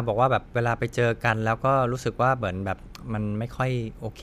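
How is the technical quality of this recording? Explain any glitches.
The recording has a persistent technical fault that runs through the whole speech clip.

Block size mismatch (truncated), throughout: one processing stage hands on blocks longer than the next stage takes in, so the tail of every block is discarded. Each cut leaves a small discontinuity, and because the cuts repeat at about 43.1 Hz, they fuse into a low buzz under the voice. That rate fits blocks of 1024 samples. The speech keeps its pitch and runs at its normal speed.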